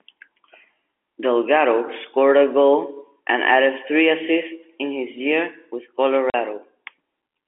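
At 6.3 to 6.34 s, just after "in his year with", packet loss filled with silence leaves a 40 ms hole, which fits two lost 20 ms packets. Its sudden, hard edges and dead-silent gap, unlike the smoothed or repeated fill of concealment, set it apart, with the G.711 telephone band itself coming through intact.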